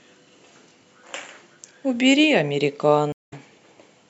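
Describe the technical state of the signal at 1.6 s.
At 1.6 s the speech signal is intact, with no audible technical fault at that moment.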